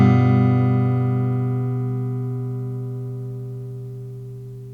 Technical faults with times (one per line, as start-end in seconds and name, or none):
none